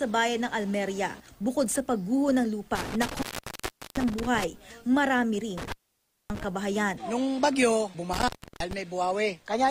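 Intermittent contact breaks the audio three times, in spans starting at 2.75 s, 5.58 s and 8.13 s. Each is a loose cable or plug briefly losing connection. The signal drops out for about 0.75 s, 0.58 s and 0.32 s, with crackle as the contact scrapes open and closed. While the line is open, faint hiss remains.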